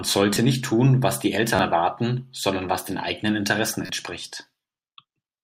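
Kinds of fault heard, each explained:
Repeated buffer: fresh audio arrived too late, so playback looped its last block of about 11 ms (which fits a 512-sample buffer), joined hard at each repeat. At 0.34 s it plays twice more, and at 1.56 s and 3.86 s three times more, skipping roughly 20 to 30 ms of speech. Such short blocks come across as a click or brief buzz, and unlike a dropout the sound never goes silent.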